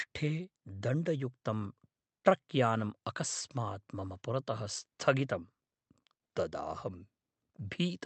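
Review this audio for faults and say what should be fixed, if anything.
Nothing here needs fixing: the speech comes through intact over a WebRTC call path, where the Opus coding limits the audio to about 8 kHz and adds the usual coding texture expected of a call.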